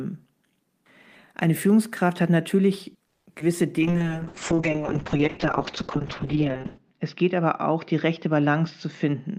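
A speech recording carries a cluster of network faults beginning just after three seconds. From 3.07 to 3.28 s there is a call audio freeze: the sound stretches briefly into a fading tail and then drops to silence for about 180 ms before resuming exactly where it left off. The result is a 190 ms hole inserted into the speech, with nothing actually lost. The likely cause is packets held up in transit until the jitter buffer ran dry, so the receiver could only extend the last sound and wait. Right after that, at 3.34–3.37 s and again at 3.39–3.42 s, come two instances of short concealed packet loss, heard as quick smears or wobbles. About 20 ms and then 40 ms of real audio never arrived in time. The decoder papered over each gap with roughly 10 ms of synthesized continuation before blending back, and the second repair also trimmed the playout delay by roughly 30 ms. From 3.79 to 4.04 s the speech drags at unchanged pitch, a jitter buffer slow-down running at 84% speed. 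The receiver repeated pitch periods and slivers of pause to rebuild its reserve, adding 48 ms of playout. Starting at 3.80 s and lasting to the end, the sound turns rough, watery and dull, a call bitrate drop. The bandwidth estimate collapsed and the encoder went from 32 kbps to 6 kbps, sitting at that floor for about 2.95 s, while the coded bandwidth shrank from 20 kHz to 8 kHz, stripping the upper frequencies and leaving coarse, muffled speech. Finally, from 9.05 s to the end the delivery sounds hurried, a jitter buffer speed-up at 117% speed. Having accumulated more audio than it needed, the receiver cut out short pitch-period chunks, removing roughly 70 ms in total to pull the delay back down, so the last stretch plays faster without any change in pitch.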